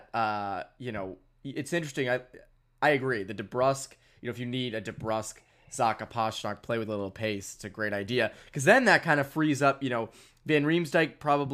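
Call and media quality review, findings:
Nothing to flag here; the speech comes through without any audible faults from the call or media path.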